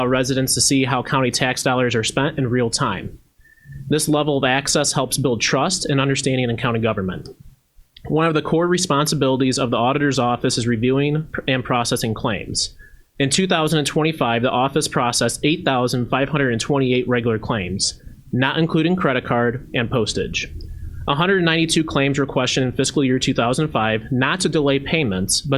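No technical faults can be heard anywhere in it.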